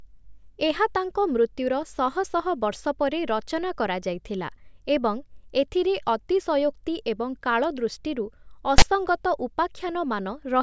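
File tags played as audio appear at 8.78 to 8.82 s, just after "ଏଥିରେ ଅତିଶୟୋକ୍ତି ଏବଂ କାଳଦୃଷ୍ଟିରୁ". A block of text metadata was fed to the decoder as though it were sample data, so character bytes became waveform values. Because text bytes cluster in a narrow positive range, the result is a loud, buzzy rasp pushed off-centre to one side of zero, lasting about 40 ms, with abrupt edges that cut into the speech like a burst of static.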